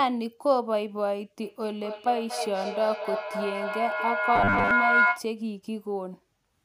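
In this speech clip, a shrill tone rises from 1.42 s and sustains until 5.35 s, settling near 1.5 kHz, pulsing roughly every 200 ms and peaking about 3 dB above the speech. This is feedback howl: two devices in one room are on the same call, so each trip from loudspeaker back into microphone adds gain until one frequency dominates. From 4.36 to 4.71 s the speech turns to a rigid, metallic buzz at 100 Hz. This robotic sound likely comes from repeated short buffers, with about 10 ms of audio looped to replace most of what was lost.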